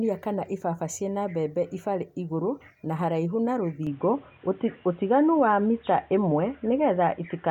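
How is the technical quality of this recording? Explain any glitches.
The speech has one glitch. From 3.87 s to the end, right after "igũrũ na haraihu na", it abruptly turns dull, losing everything above 3.8 kHz, shifts level by around 5 dB and gains faint new background noise. This likely comes from the input switching to a poorer device.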